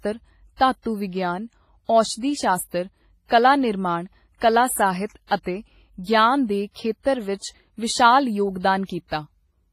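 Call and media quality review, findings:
Speech, throughout: ringing, washy smear around onsets, hiss that breathes with level, nothing above 15.4 kHz. Likely heavy WMA compression: long transform blocks spread quantisation noise over tens of milliseconds and zero weak lines, fitting about 24 kbps. Constant, unlike bursty packet-loss damage.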